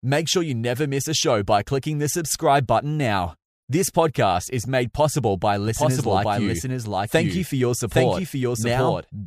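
From 5.68 s, just after "is made possible by", a doubled audio track starts abruptly and runs to the end. A full-band copy at roughly equal level trails about 0.7 s behind, likely from a slower second capture path or an out-of-step edit. Spectrogram patterns repeat, shifted, without decay.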